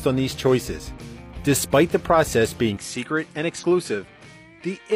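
At 0.93 to 0.98 s, and again at 3.58 to 3.64 s, damaged data in the compressed stream makes the decoder lose sync, producing a brief glitch. From 2.77 s the sound abruptly dulls, with nothing above 10.9 kHz, about 5 dB quieter, and no gap. The most likely cause is the input being switched to a poorer device, which adds a faint new noise floor.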